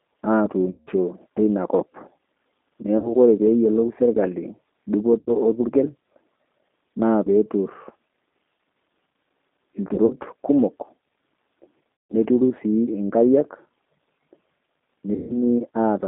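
Throughout, the speech sounds plainly rough and synthetic, confined to roughly 250 Hz to 3.7 kHz with nothing bright on top. That is the G.729 codec at 8 kbit/s, rebuilding each 10 ms frame from a filter, pitch predictor and a few pulses.

At 0.71 to 0.91 s, 2.98 to 3.15 s, 5.19 to 5.31 s, 9.94 to 10.14 s, 12.00 to 12.15 s and 15.14 to 15.42 s, the sound smears into a fading buzzy tone or coloured noise, then stays weak briefly. This is VoIP packet loss concealed by the speech codec. The decoder extrapolated through gaps of 60 to 160 ms, and at 9.94 s through short losses scattered over 160 ms.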